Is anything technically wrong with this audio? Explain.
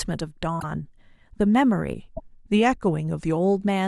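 Yes, there are two kinds of fault in this speech clip.

At 0.59 to 0.64 s and again at 2.15 to 2.20 s, a broken MP3 bit reservoir is the likely cause: after frames went missing, the next frames read borrowed data from the wrong place. Each break is a skip forward with a brief chirp, burst of noise or short hole about 50 ms long, roughly two 24 ms frames.

From 1.95 to 3.37 s, a drift correction step likely changed the playback rate in one jump to rebalance a buffer between two clocks. The sound slows by about 5.4% and drops about 96 cents, nearly a semitone.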